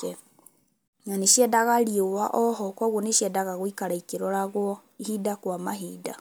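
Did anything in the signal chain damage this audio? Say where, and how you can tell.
No, nothing along the chain has left an audible mark on this speech, and the signal holds steady throughout with no sign of damage at any stage.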